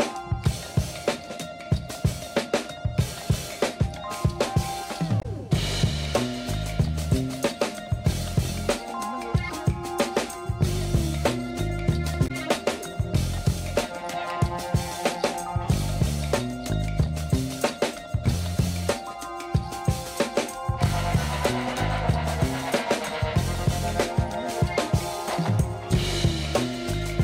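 Damaged data in the compressed stream causes brief glitches at 5.19–5.26 s and 12.24–12.31 s where the decoder lost sync.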